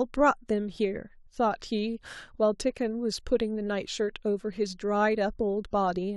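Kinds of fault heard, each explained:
Block size mismatch (truncated): One stage writes longer blocks than the next reads, so each block's tail is dropped. The speech carries a 43.1 Hz buzz, which fits 1024-sample blocks. It runs at 1.0 times normal speed, so very little is lost per block.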